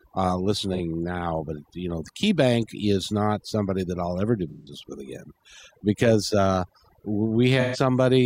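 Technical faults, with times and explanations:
Throughout: overdone noise removal. The background sits at near silence, dotted with twinkling specks. A noise reduction stage was set too hard. It pulls single frequency bands far down or off whenever they come close to its noise estimate. Quiet parts of the speech fall below that line too, so they vanish with the noise. The stray bands that slip through make the specks.
0.74 to 0.79 s, 4.50 to 4.73 s, 7.60 to 7.77 s: AAC frame loss with concealment. The first gap is brief, a short patch of concealed sound. That fits one lost frame. The second comes after "that I'll ever do" and before "with again because uh". It and the third each last a short stretch that blurs and thins out. These fit runs of several lost frames. The decoder rebuilt each gap from the last good spectrum, so the sound smears instead of cutting out.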